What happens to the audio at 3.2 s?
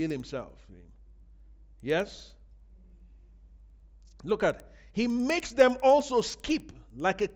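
At 3.2 s, as throughout the speech, the resampler restarted on every block, converting each 100 ms block without its neighbours. Every block edge gets a small error, heard as a regular tick at 10 per second whenever speech is present.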